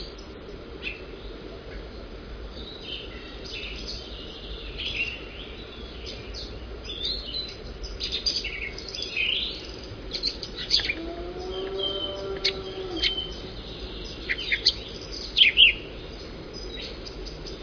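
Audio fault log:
No technical faults can be heard in this recording of sounds.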